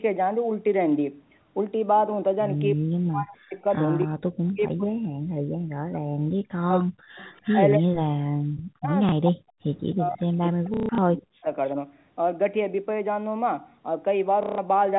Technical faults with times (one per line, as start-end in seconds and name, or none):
2.74-3.65 speech suppressed in double talk
3.73-4.05 echo leak
4.04-7.21 speech suppressed in double talk
4.47-4.51 echo leak
7.35-7.59 echo leak
7.78-9.56 speech suppressed in double talk
9.09-9.12 packet loss with last packet repeated
9.91-11.47 speech suppressed in double talk
10.74-10.98 packet loss with last packet repeated
14.43-14.58 packet loss with last packet repeated